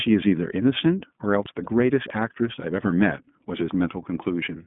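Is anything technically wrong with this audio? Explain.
Yes, there are two faults.

The iLBC codec runs throughout: the speech is confined to roughly 150 Hz to 3.5 kHz, and its excitation is coded in independent 20 ms frames, fitting the 15.2 kbps mode, which gives a plainly rough, synthetic quality.

Lost iLBC frames at 1.64 to 1.68 s: a gap that points to a single dropped 20 ms frame is filled by repeating the last pitch cycle mixed with noise, heard as a brief buzzy held vowel before clean speech returns.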